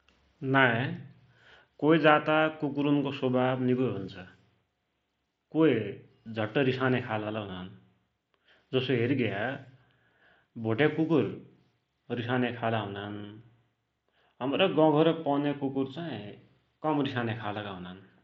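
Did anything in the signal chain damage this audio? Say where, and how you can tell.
No, no stage in the chain damaged this audio.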